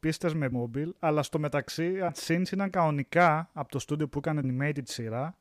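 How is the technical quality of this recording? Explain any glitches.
The recording has three dropouts where the speech jumps forward.

Compressed frames skipped at 0.51 s (just before "αλλά στο μεταξύ"), 2.08 s (just after "αλλά στο μεταξύ") and 4.43 s. Whole 26.1 ms frames were never decoded, cutting about 0.4 s, 0.7 s and 0.2 s of speech.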